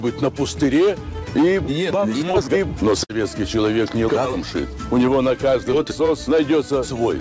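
Packets went missing on the way through a call path whose codec leaves nothing above 8 kHz, which fits wideband G.722. The first fault is a short concealed packet loss from 2.31 to 2.36 s: about 20 ms of audio never arrived, so the receiver extended the preceding sound across the hole and then blended back into the real signal. The patch is heard as a brief smear or wobble. The second is a burst of packet loss from 3.04 to 3.11 s, where roughly 60 ms was lost in a row. The receiver kept continuing the last sound and faded it as the gap stretched on, so a held buzz or fading hiss replaces the audio, and playback then picks up further along with that stretch missing.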